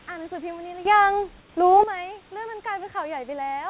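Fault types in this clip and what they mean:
sudden gain jump: A gain change was likely applied without a ramp, so sound and background leap together by about 14 dB at 0.85 s.
comfort noise in place of the background: The sender likely paused transmission in a gap, so for 150 ms synthetic noise, about 2 dB quieter and featureless, replaces the real background.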